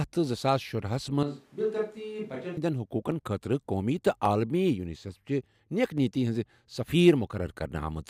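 After "زٕساس شُرا ہسَ", from 1.23 to 2.57 s, the speech abruptly turns hollow and roomy, roughly 10 dB quieter with thinner bass and more room noise. This likely comes from a switch to a distant microphone. Sharp single clicks occur at 1.97, 3.12, 4.25, 5.98 s (just before "نِیَتی ہِنٛز") and 7.50 s. Each is a tiny jump in the waveform, likely dropped samples, with a fraction of a millisecond missing.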